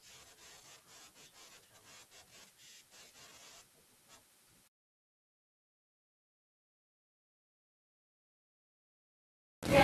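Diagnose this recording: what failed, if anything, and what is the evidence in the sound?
From 4.68 s to the end the speech goes grainy, which points to low bit depth without dither, likely a sample-format conversion rounding to about 5 bits, with distortion only about 15 dB down that tracks the signal.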